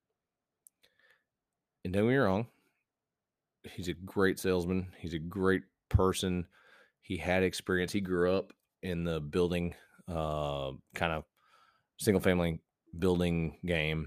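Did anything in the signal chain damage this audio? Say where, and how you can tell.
No, nothing in the chain audibly damages this speech recording at any stage.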